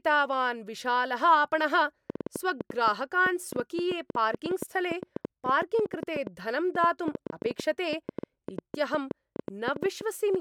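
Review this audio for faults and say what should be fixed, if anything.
A train of clicks runs from 2.10 s, just after "विशालः आपणः", to 10.36 s: around seventy similar pops at an uneven 7.3 per second, peaking roughly 10 dB above the speech, likely from nearby equipment interference or a faulty connection or power supply. Prevent it by isolating cabling and checking the interface.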